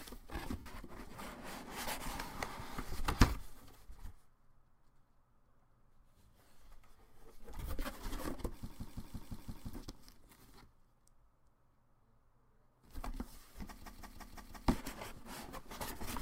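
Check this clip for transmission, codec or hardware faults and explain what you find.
Three faults are present: one burst of lost LE Audio frames and two system hang loops. The light lossy compression on the track is at most a faint watery texture and does not count as a fault.

Lost LE Audio frames, 0.58 to 0.66 s. About 75 ms of Bluetooth LE Audio data goes missing, which fits roughly ten 7.5 ms LC3 frames. The decoder conceals the gap by repeating the last good spectrum with its phases scrambled and lowering the level as the gap goes on. What you hear is a short, grainy smear where the sound should continue. A dropout would give clean silence, and a loop would give exact repeats; this gap gives neither.

System hang loop, 8.70 to 9.73 s. The host stalls while the audio hardware keeps replaying the same ring buffer. That buffer is 170.67 ms long, which fits an 8192-sample buffer. The same fragment plays six times in a row, identical each time, so it becomes a rhythmic stutter at 5.86 Hz. 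Frame concealment smears and fades; this fault repeats the fragment exactly, with no fading. Little or no audio appears to be lost, and the sound picks up where it left off.

System hang loop, 13.82 to 14.68 s. The same 170.67 ms loop returns, this time five times at 5.86 Hz. The identical loop length points to the same buffer and the same stall mechanism.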